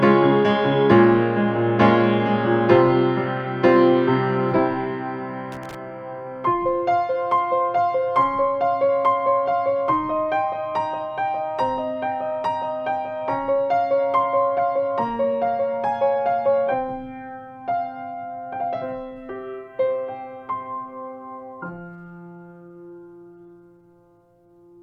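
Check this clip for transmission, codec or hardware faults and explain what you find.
Two faults turn up, one hardware and one codec.

Loose connector crackle from 5.52 to 5.75 s: a worn or dirty contact is making and breaking as something shifts, chopping the signal on and off. You hear it as a quick, ragged burst of scratchy crackle lasting under a quarter of a second.

Corrupt frame decoded at 14.57 to 14.59 s: what sounds like a single compressed frame arrived with flipped bits, and the decoder played it anyway, so misread gains and codes dumped energy at wrong frequencies. It comes across as a short blip, peaking around -30 dBFS.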